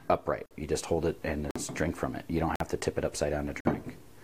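Gaps between chunks cut hard-edged silences of about 48 ms at 0.46, 1.51, 2.56 and 3.60 s. Each after the first follows a second of audio, pointing to 1 s chunks joined with padding.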